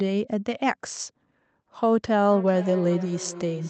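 A speech recording in which two devices in the same room joined the same call, so each microphone picks up the other's loudspeaker and the echo canceller on each side only removes its own playback. The result is a feedback echo between two devices from 2.31 s to the end at 3.69 s: the speech returns roughly every 0.4 s, each pass thinner and more ringing, peaking about 17 dB below the direct speech.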